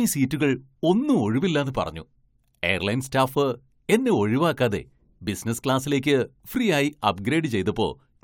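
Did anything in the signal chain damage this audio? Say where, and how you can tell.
No, nothing in the signal chain has damaged this speech recording, and no stage from capture to playback leaves an audible mark on it.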